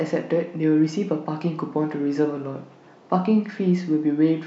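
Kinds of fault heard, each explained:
Nothing stood out on listening to this speech recording.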